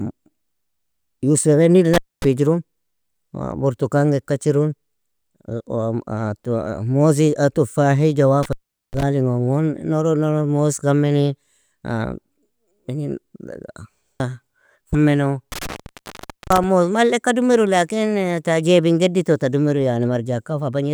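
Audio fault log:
1.94–2.25 s, 8.43–9.03 s and 15.52–16.64 s: intermittent contact, three times. A loose plug or cable lead briefly loses its connection, so the speech drops out with a crackle as the contact breaks and remakes, leaving just faint hiss in the gap. The line stays open for about 0.24 s, then 0.40 s, then a longer 0.85 s on the last one, which clears just before "moz malleka dumiru lakin".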